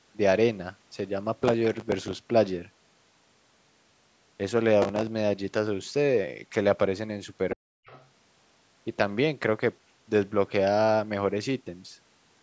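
Speech, in a call-processed path whose content stops at about 8 kHz, carries processor overload crackle from 1.43 to 2.17 s and again from 4.82 to 5.07 s. The gritty tearing comes from a long run of missed deadlines on very short buffers, roughly 3 ms each, each miss filled with a replayed scrap of old audio. That is what sets it apart from a single click or a network dropout: it is a dense texture riding on the sound for the whole stretch, with no silent gaps, and it stops as soon as the load passes. From 7.55 to 7.85 s the speech sinks by about 40 dB, speech suppressed in double talk, which is likely the echo canceller turning down the talker while the far side was also speaking. Unlike a packet-loss gap, the level is pulled down by the canceller, so the talker dips deeply and then returns. Directly after, from 7.86 to 8.07 s, the other side's voice leaks through, sitting about 25 dB below the talker. 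What distinguishes this from room reverb or a smeared repeat of the talker is that a different voice comes through, likely loudspeaker pickup the canceller failed to remove.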